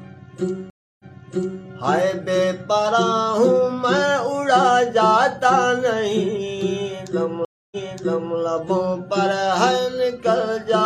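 Two stream reconnect faults break the audio, at 0.7 to 1.64 s and again at 7.45 to 8.37 s. Each begins with a dropout, 294 ms and then 265 ms of silence, after which playback resumes 650 ms earlier than where it stopped, so a short stretch is heard twice. That pattern fits a dropped connection: the player reconnects, starts a fresh decoder mid-stream, and the server resends a burst of already-played audio.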